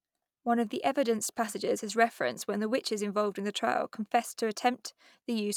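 A short recording of speech, with no technical faults audible anywhere in it. Nothing in the signal calls for a time or a cause.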